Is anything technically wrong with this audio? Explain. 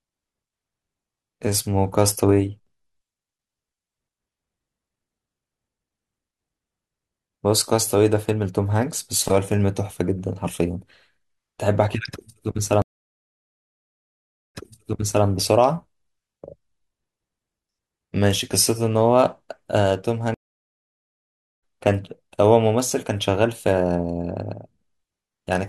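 Yes, there are two stream reconnects in this speech. At 12.82 s to 15.26 s the audio goes silent for about 1.7 s, then picks up 0.72 s earlier, so a bit gets repeated. At 20.34 s to 21.63 s there's a 1.3 s gap, and it comes back roughly a second later, skipping some speech. Each time the connection dropped and the player restarted its decoder mid-stream, so the sound fades back in.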